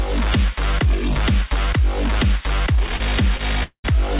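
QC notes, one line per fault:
2.96–3.01 s and 3.37–3.41 s, short stall from a late packet: the jitter buffer ran dry, so the last sound is stretched for 30 ms and then 19 ms before resuming where it stopped. Nothing is lost, but timing slips later. A spectrogram shows brief smeared, repeated frames; the waveform shows a short periodic stretch.
3.63–3.86 s, call audio freeze: the sound stops advancing for 208 ms, most likely because packets were held up and the buffer emptied. The last sound is continued as a fading buzz or hiss and ends in about 90 ms of silence before the audio picks up where it left off. Nothing is missing. A spectrogram shows a flat, smeared band fading to blank; the waveform shows a decaying stretch, then a flat gap. The call path's band limit is visible throughout, with no energy above 4 kHz, which fits a 64 kbps G.711 A-law codec.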